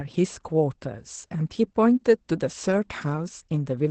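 Across the whole speech clip there is Opus voice compression: nothing above 8.6 kHz, and the voice sounds muffled, hoarse and slightly robotic. The coarse linear-prediction coding behind this damage points to a low bitrate around 12 kbps in wideband SILK mode.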